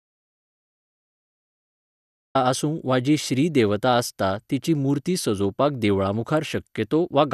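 The speech clip opens in dead silence, with no room tone at all, and the voice comes in mid-flow at about 2.35 s. This is an audio dropout to silence already under way at the start, likely from the input being lost while silence was still being recorded.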